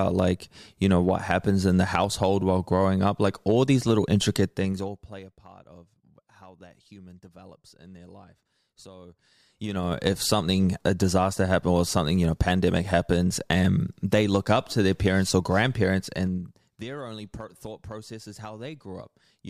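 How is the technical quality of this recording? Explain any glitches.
The speech has three stretches of zipper noise, where level changes are audibly stepped. Zipper noise occurs from 4.46 to 5.43 s (roughly 25 dB down), 9.13 to 10.08 s (roughly 25 dB up) and 16.00 to 16.88 s (roughly 15 dB down). Gain moves in 2 dB jumps, ten to fifteen per second, without smoothing, so each step clicks into a rapid zipping texture.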